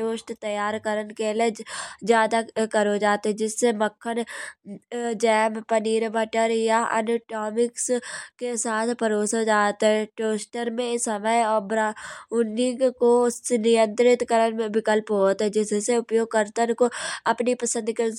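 Nothing in this recording of speech stands out as a technical fault, so there's no problem to point to at any moment along the way.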